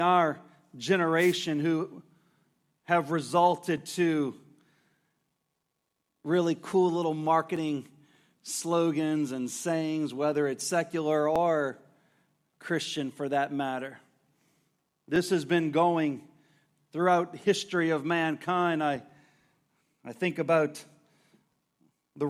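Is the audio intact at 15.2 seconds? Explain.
No. Around 15.2 s, one of a series of clicks lands, part of clock drift buffer slips running from 3.78 s to 18.96 s and recurring every 3.8 s, roughly five in all. Each is likely a jump of a few dozen samples as two independently clocked devices, about 200 ppm apart, drift until the buffer drops or repeats a block. On a waveform each slip is a small step; on a spectrogram, a thin broadband vertical line.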